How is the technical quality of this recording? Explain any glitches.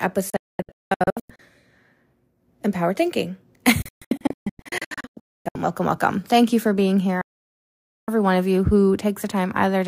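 The speech suffers three digital broadcast dropouts. At 0.30 to 1.40 s and 3.82 to 5.56 s (just before "welcome welcome"), the receiver lost good frames and muted, leaving several short silent holes, the longest about 0.22 s and 0.26 s. A 7.21 to 8.08 s dropout between "you for being here" and "every one of you" is a near-solid gap. Each mute snaps in with a 3 ms fade, and what was sent during the holes is gone.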